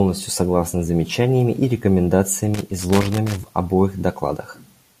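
From 2.52 s to 3.48 s the speech is broken by an irregular burst of crackling and scratching. The sound drops in and out in rapid fragments for almost a second. This is loose connector crackle. A worn or dirty contact somewhere in the signal path is moving, so the connection keeps making and breaking. That chops the audio into pieces, and any DC present on the line turns each break into a click.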